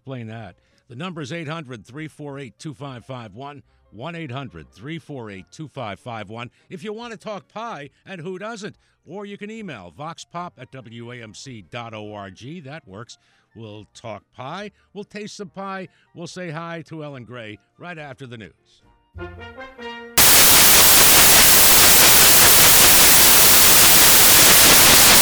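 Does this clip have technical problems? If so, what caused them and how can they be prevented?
Yes. From 20.18 s to the end at 25.22 s, the audio turns into loud, harsh broadband noise from samples built from the wrong bytes: the reader assembles each sample's bytes misaligned or in swapped order, so the rapidly changing low bits become the most significant part of every value. Prevention: declare and verify byte order, sample width and frame alignment at every read and concatenation boundary.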